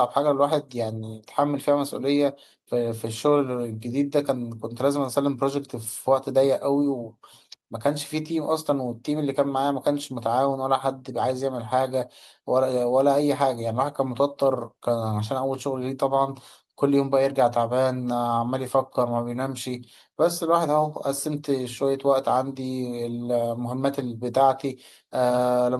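No technical faults are audible anywhere in the speech recording.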